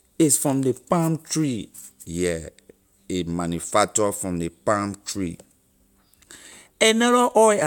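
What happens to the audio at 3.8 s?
Nothing goes wrong at 3.8 s; the speech carries straight through that moment intact, with no dropout, click or distortion.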